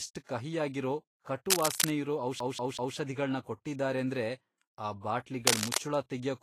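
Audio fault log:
throughout Vorbis compression: The speech has a plainly audible hissy, grainy texture, with roughened tonal detail and softened attacks, and nothing above about 21.1 kHz. This is likely Vorbis coding at a low rate, around 36 kbps. The codec keeps a smooth outline of the spectrum but quantises the fine detail on top of it so coarsely that, especially in the treble, the detail is replaced by noise of similar energy.
2.40–2.96 s CD stuck on one turn: A quick, even stutter, with the same 0.19 s fragment playing three times in a row with a brief gap at each restart, just before "ಕೊಟ್ಟಿದಾರೇಂದ್ರೆ ಆ". This is a skipping disc. Each time the scratch comes round, the laser jumps back one track to the same spot, so the fragment repeats at a steady rate until it finally breaks free and playback moves on.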